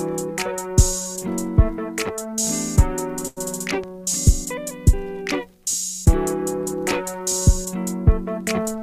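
At 3.27 to 3.39 s the sound hangs, stretched for about 91 ms with a faint buzz or dip. This is a short stall from a late packet: the jitter buffer emptied and the receiver held the last sound until the packet arrived.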